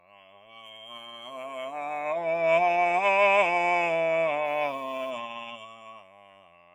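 Throughout this music, a noise suppressor applied to music or sounds is pumping the level. It treats sustained tones and reverb tails as noise, so gain swings by roughly 20 dB. On a waveform the envelope breathes unevenly, and a spectrogram shows held partials fading between sharper onsets.

From 0.0 to 1.34 s, sound is cut by the noise suppressor: the sustained material sinks by as much as about 14 dB while transients survive. It sounds thin and hollow. The spectrogram shows onsets intact but their continuing harmonics and decay trimmed into dark gaps.

Between 4.45 and 5.11 s a distortion rides on the music, and the quieter moments fill with hiss. This is likely a stuck bit, one data bit frozen so that about half the samples jump by a fixed step. The waveform shows samples jumping by a fixed step, and the spectrogram shows broadband speckle.

From 5.28 s to the end at 6.75 s, sound is again cut by the noise suppressor, falling by up to about 14 dB. 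Tails shorten and the level wobbles, visible as a collapsing envelope and truncated harmonic traces.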